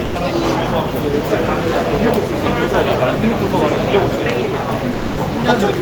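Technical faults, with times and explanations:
0.05 to 0.15 s, sound dropped by the voice detector: right at the start, 100 ms of the sound gives way to flat filler noise before it resumes. The likely cause is the sender's Opus DTX treating the opening as background and pausing transmission, so the receiver filled the gap with comfort noise.
4.93 to 5.17 s, sound dropped by the voice detector: the same thing again near the end, likely from the same cause, this time 240 ms of sound replaced by steady noise until the detector triggers and the real audio returns.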